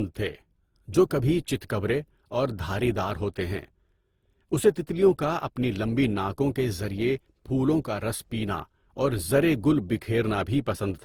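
A speech clip that sounds swirly, smeared and hollow from start to finish, with consonant attacks blurred. That is likely generation loss: about seven lossy passes, consistent with Opus near 48 kbit/s, each requantising on a shifted frame grid so noise accumulates.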